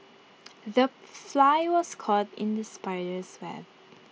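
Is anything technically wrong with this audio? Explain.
No, nothing here is technically wrong; it's speech carried over a Bluetooth mSBC headset link, so it tops out around 8 kHz and has the light graininess on louder moments that comes with that codec.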